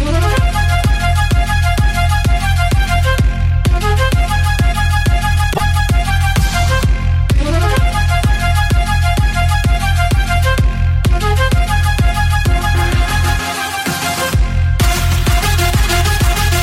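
At 5.5 s, damaged data in a compressed stream breaks the audio for about 0.1 s, until 5.61 s. Corrupted bytes made the decoder misread frames and lose sync. It hunted for the next valid frame header. The result is a brief, garbled blip.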